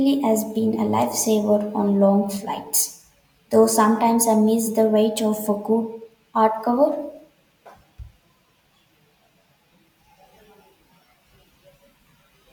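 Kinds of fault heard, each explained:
No audible technical fault turns up anywhere in this speech recording, and the signal holds steady throughout.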